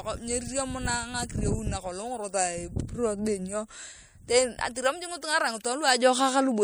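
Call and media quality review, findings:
MP3 compression, whole speech clip: watery, swirly sibilants, smeared consonant onsets. Likely a low-bitrate MP3 stage, roughly 64 kbps, zeroing weak frequency lines frame to frame. The flickering artefacts set it apart from simple low-pass filtering.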